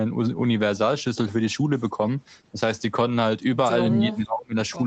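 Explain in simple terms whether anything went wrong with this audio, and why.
Something went wrong near the end, from about 3.96 to 4.55 seconds, most likely speech suppressed in double talk. The call's echo canceller probably heard sound from the other end of the call on the loudspeaker while this speaker was talking, could not tell the two apart, and turned both down. For roughly half a second, this speaker's voice becomes much quieter and dips unevenly. The call's normal microphone processing simply trims the lowest bass.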